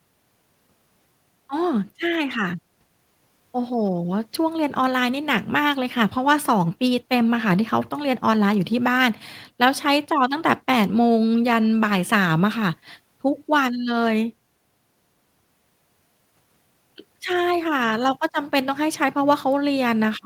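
No technical faults can be heard anywhere in the recording.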